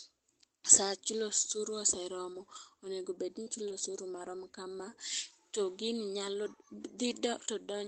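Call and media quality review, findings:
Brief roughness, a grainy, noisier patch with no gap, at 2.33 s (just before "onego bed ni"), 2.55 s, 3.46 s (just after "onego bed ni") and 3.70 s (before "osuru marom kama"). Lost packet rebuilt from error correction: each 20 ms lost frame was replaced by the low-bitrate backup copy carried in the next Opus packet.

Short smear/wobble, 3.43–3.48 s and 3.68–3.72 s. Short concealed packet loss in the receiver's decoder: about 40 ms and 20 ms arrived too late, so the decoder extended the preceding sound to fill them, then crossfaded back. Each ends in the error-corrected frames at 3.46 s and 3.70 s. Call band tops out near 8 kHz, consistent with Opus wideband around 24 kbps.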